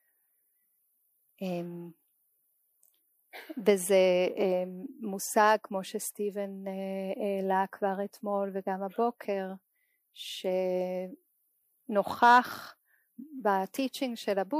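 No technical faults can be heard anywhere in the audio. Nothing in the sound calls for a time stamp or a repair.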